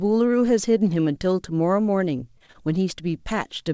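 Between 2.16 and 2.56 s the call's packets repeatedly failed to arrive in time, leaving four short holes of up to 23 ms that the receiver filled by stretching the preceding sound. This is repeated packet loss, heard as a brief robotic chopping in the speech, with about a fifth of that stretch patched over. The wideband call path, which carries nothing above 8 kHz, fits a G.722 codec.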